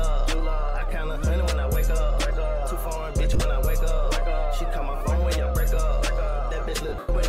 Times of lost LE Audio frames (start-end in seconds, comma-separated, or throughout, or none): 3.34-3.41, 6.89-7.09